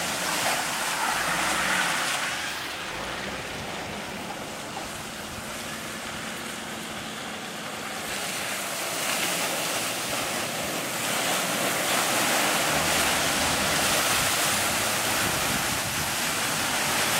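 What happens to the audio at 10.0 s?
Nothing goes wrong at 10.0 s; the audio runs through that moment intact, with no dropout, click or other fault.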